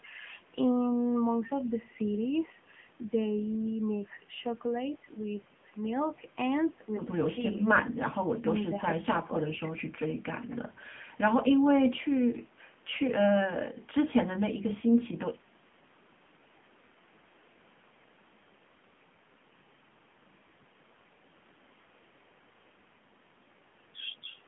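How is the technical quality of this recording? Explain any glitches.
Quality is limited by one fault that runs through the whole clip. Throughout, the speech carries AMR narrowband mobile codec damage. Nothing passes above about 3.6 kHz, leaving a thin 150 to 3400 Hz phone band. The coarse vocal-tract model sounds plainly buzzy and synthetic, which points to a low bitrate near 8 kbps.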